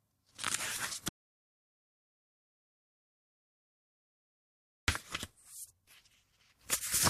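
At 1.09 s the sound cuts off abruptly and the track goes to silence, with no background or room tone underneath, until it resumes mid-flow at 4.88 s. This is an audio dropout to silence lasting about 3.79 s. The likely cause is a loss of input, such as a disconnected device, a failed link or an unintended mute, while the recorder kept writing silence. Whatever sounded during that span is unrecoverable.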